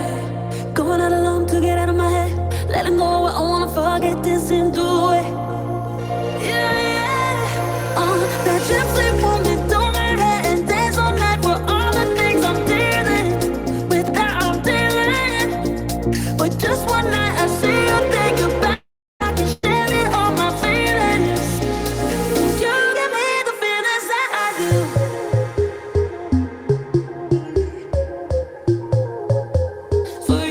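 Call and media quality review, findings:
Long network dropout, 18.73–19.23 s: the last sound is carried on as a fading buzz or hiss, then about 0.35 s of silence. Likely a network outage; about 0.46 s of audio is never played.

Lost packet rebuilt from error correction, 19.20–19.22 s and 19.63–19.65 s: 20 ms of rougher, noisier audio with no gap. The decoder is playing the low-bitrate in-band FEC copy carried in the following packet.

Burst of packet loss, 19.52–19.66 s: the preceding sound is held and faded for about 0.11 s, with no silence. Jitter buffer concealment is bridging roughly 100 ms of packets that were lost or arrived too late, and that audio is skipped.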